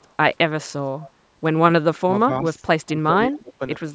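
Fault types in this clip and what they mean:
echo leak: A faint copy of the speech follows it about 0.19 s later, very weak near the start and louder, about 25 dB down, around 1.01 to 1.11 s. It is likely an echo canceller letting loudspeaker pickup through. Unlike room reverberation, it is a distinct repeat at a fixed delay, not a smooth decaying tail.
speech suppressed in double talk: Between 1.67 and 3.6 s the speech repeatedly sags by up to about 20 dB, in pieces totalling roughly a second. This is likely an echo canceller turning down both talkers while they overlap. Unlike a network dropout, the sound is turned down by processing rather than lost in transmission.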